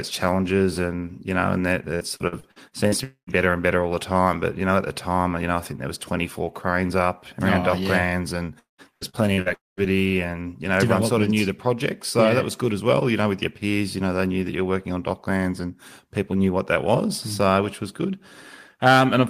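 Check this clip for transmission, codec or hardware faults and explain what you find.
There are two kinds of network fault here, each showing up twice, both times in the same pattern: a choppy patch followed almost immediately by a hole.

Repeated packet loss (robotic sound) starts right after "you know and that", from 1.95 to 2.95 s. Audio packets keep going missing, seven gaps in about a second, and the receiver papers over each one by stretching the last bit of sound. The gaps are short, 47 ms at most, but they cover nearly 30% of the stretch, so it comes out choppy. The same thing happens after "yeah and", from 8.59 to 9.49 s. There are only five gaps this time, but one runs 190 ms and concealment covers about 43%, so more of the stretch is patched over.

Then there are two dropouts. From 3.04 to 3.30 s, just before "better and better all", the sound smears into a fading buzz or hiss and then goes silent for about 110 ms before picking up again. 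From 9.54 to 9.80 s it does the same, with a longer silence of about 190 ms. In each case roughly a quarter second of audio never comes back. The likely cause is a long network dropout: nothing arrived, so the receiver extended the last sound until it faded out.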